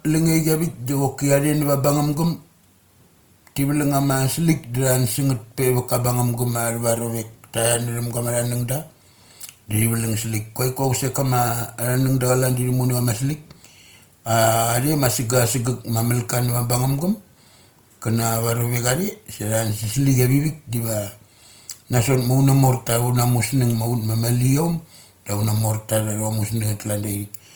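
Throughout, likely Opus compression in music mode at around 24 kbps fills starved bands with noise, leaving the speech plainly grainy and rough.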